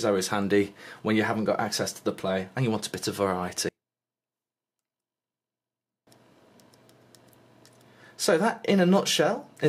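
From 3.69 to 6.07 s the sound collapses when heard in mono. The level drops by about 36 dB, leaving only a faint trace. The likely cause is one channel inverted. With one side's polarity reversed, everything the two channels share cancels when they are summed. What survives is only the small difference between them. Normal level returns at 6.07 s.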